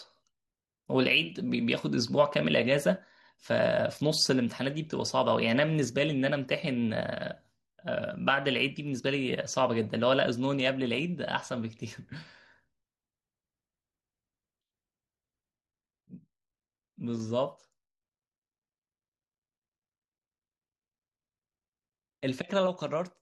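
At 15.53 s there is a sudden gain jump: the speech and the background noise drop together by about 4 dB and stay lower to the end. The step is instantaneous rather than faded, which points to a likely gain setting applied without a ramp.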